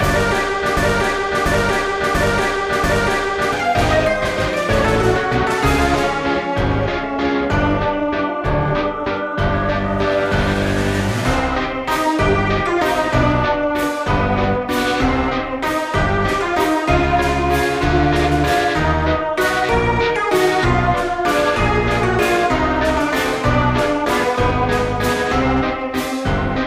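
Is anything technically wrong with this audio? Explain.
Yes. From 0.77 to 3.53 s there is a broken-record loop: one 689 ms fragment plays four times back to back, and the audio that belonged there is lost. The likely cause is a stalled player or stream resending its last fragment. A waveform or spectrogram shows identical blocks repeating every 0.69 s.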